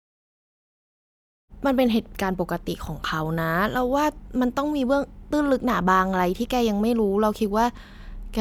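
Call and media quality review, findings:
No faults found in the speech clip; the smooth fade-in at around 1.5 s is an ordinary edit.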